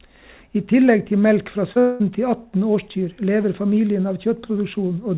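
A speech recording carried over a call path, band-limited with nothing above 4 kHz, which fits a G.711 mu-law codec at 64 kbps, shows two adjacent faults. First comes a short concealed packet loss from 1.72 to 1.78 s: about 40 ms of audio reached the decoder too late, and the receiver covered roughly 36 ms by extending the preceding sound before blending back, leaving a brief smear or wobble where a short consonant may disappear. Then, from 1.80 to 2.02 s, the audio is replaced for about 200 ms by a synthetic continuation of the last sound that never drops to silence. It then resumes further on with that stretch missing, the likely cause being a long network dropout whose gap the receiver filled entirely with concealment.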